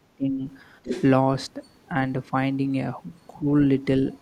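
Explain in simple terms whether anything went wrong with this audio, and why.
Yes, two kinds of problem can be heard.

Speech suppressed in double talk: from the start to 0.42 s the talker's voice drops away almost completely, and again at 3.39 to 3.47 s it dips briefly and more mildly. This is likely an echo canceller that heard both sides talking at once, could not tell the talker apart from the echo of the other side, and turned everything down.

Other side's voice leaking through: between 0.83 and 1.04 s a second voice comes through, nearly as loud as the talker. The talker's device plays the other side on a loudspeaker, and the microphone picks that sound back up. This is likely an echo canceller that failed to remove the loudspeaker sound, so a short stretch of it was sent back along with the talker.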